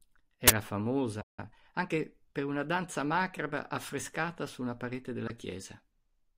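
Uninitialised buffer, 0.48 to 0.50 s: leftover memory was played as audio, giving a harsh 23 ms burst of digital noise, which fits a 1024-sample block.

Playback stall, 1.21 to 1.39 s: the speech drops out for about 168 ms, likely because the player ran short of data or its thread was blocked.

Time-compressed catch-up, 1.39 to 2.05 s: the backlog is trimmed by splicing out small pieces, so speech runs at 1.25 times normal speed without a pitch change, ending just before "una danza macabra affrescata".

Corrupt frame decoded, 5.28 to 5.30 s: just after "affrescata su una parete", damaged bits in about two compressed frames produce a brief chirp, blip or burst of noise peaking around -20 dBFS.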